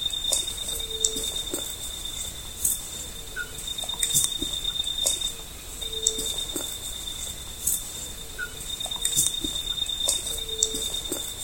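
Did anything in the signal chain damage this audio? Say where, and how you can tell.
No, no chain damage heard.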